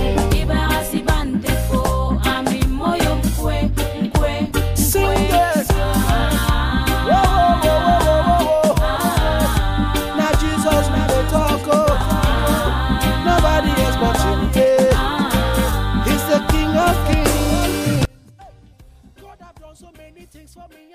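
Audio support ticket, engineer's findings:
Audio dropout to a faint residue from 18.05 s, lasting to end of clip. Signal cuts abruptly rather than fading; gap holds only faint sound, roughly 30 dB below normal level. Path after the break stays live, so likely an upstream source or input connection lost while downstream chain kept running, passing leakage only.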